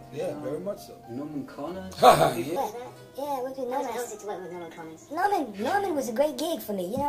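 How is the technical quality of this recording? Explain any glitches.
The recording has one clear glitch: from 2.56 s to the end, there is a section at the wrong speed. It plays 1.43 times too fast, so everything turns hurried and roughly seven semitones higher. The likely cause is an editor or player running it on the wrong clock. A pure pitch shift would leave the timing intact, but here tempo and pitch jump together.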